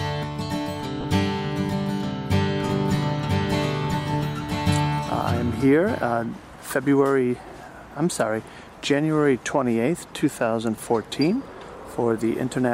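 At 1.01 to 1.04 s, lost LE Audio frames leave a 30 ms gap, which fits three 10 ms frames. The LC3 decoder fills it with a noisy smear of the preceding sound rather than silence, which separates it from a plain dropout.

From 2.69 to 5.65 s there is a doubled audio track: a full-band copy, about as loud as the original, runs roughly a second behind. The likely cause is a slower second capture path or an edit holding two copies out of step. Unlike an echo or reverb, it has no decay or room colouring and switches on and off abruptly.

At 8.65 to 8.67 s and again at 10.76 to 10.78 s, further lost LE Audio frames produce 20 ms concealment gaps, matching two frames each. Each is a brief, noisy, smeared blip rather than a clean click or a silent hole.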